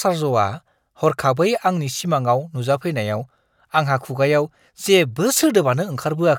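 No technical fault can be heard anywhere in the recording. The speech comes through steadily from beginning to end, with nothing breaking into it.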